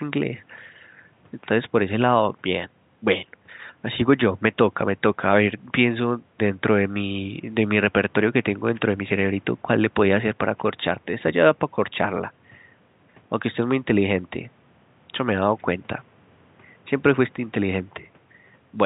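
Nothing stood out as a fault on listening to this speech recording.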